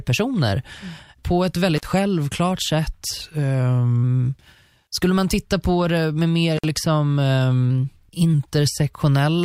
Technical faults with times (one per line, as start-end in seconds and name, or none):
1.76-1.84 intermittent contact
3.22-4.03 drift correction step
6.57-6.65 intermittent contact
7.71-8.34 drift correction step